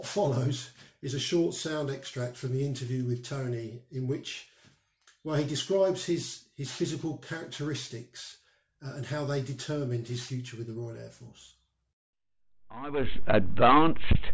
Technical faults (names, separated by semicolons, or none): aliasing